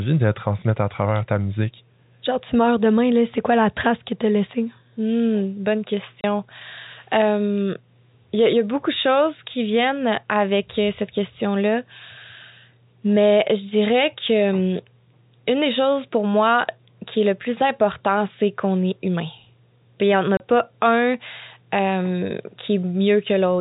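At 6.21 s and again at 20.37 s, between "n'y en a" and "pas un euh", the speech drops out for 30 ms with hard edges. This is packet loss filled with silence, consistent with one lost packet each time, over an intact G.711 telephone band.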